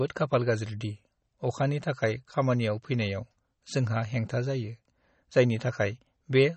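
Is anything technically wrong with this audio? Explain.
Yes. Throughout the speech, the treble stops dead at about 8.4 kHz, and plainly audible watery, swirling artefacts colour the sibilants and smear consonant onsets. This is likely MP3 compression at a low bitrate, which fits about 32 kbps. The encoder discards high frequencies and lets weak spectral detail flicker between frames.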